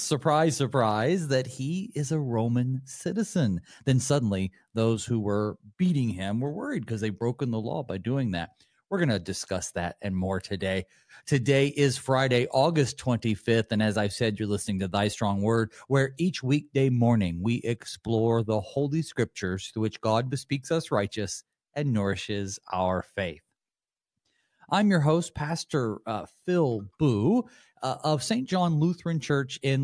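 No technical faults can be heard in the recording, and the signal stays steady and intact throughout.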